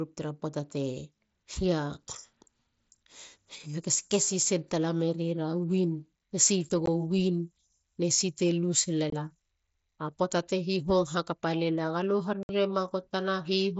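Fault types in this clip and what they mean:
Unconcealed Bluetooth headset packet loss: voice packets between headset and phone went missing and were replaced by silence instead of being patched over, leaving gaps in the speech at 6.86 s (about 15 ms), 9.10 to 9.13 s (about 22 ms) and 12.43 to 12.49 s (about 60 ms). On the waveform each gap is a flat run with sheer edges. On the spectrogram it is a full-height vertical blank cutting through the wideband speech, which reaches up to 8 kHz.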